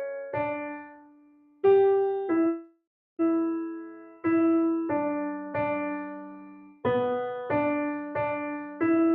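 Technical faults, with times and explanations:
Throughout: noise suppressor applied to music or sounds. A speech-tuned suppressor keeps judging sustained parts of the sound and its ambience as noise, so level swings by about 15 dB as its gain rises and falls. Onsets pass while held portions and decaying tails sink, giving a pumping, thinned texture. On a spectrogram, sustained bands fade or flicker between bright attack columns, and the waveform envelope shows uneven dips.
0.54–1.63 s, 3.76–4.25 s, 5.38–5.54 s, 6.02–6.84 s, 8.57–8.80 s: sound cut by the noise suppressor. In these stretches the suppressor treated the sound as noise and pulled it down harder than elsewhere: about 20 dB, 13 dB, 5 dB, 19 dB and 8 dB respectively. On a waveform the envelope collapses after each attack, and a spectrogram shows energy vanishing early while the onset columns remain.
2.47–3.22 s: long network dropout. 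About 720 ms of audio is missing. For roughly 0.7 s the gap is papered over by a stretched continuation of the preceding sound, which turns buzzy and hissy as it fades, leaving about 320 ms of silence before the audio resumes further along. The likely cause is lost packets being concealed by the receiver. A spectrogram shows a smeared, repetitive band dimming into an empty region, and the waveform shows a decaying repetitive pattern then flatline.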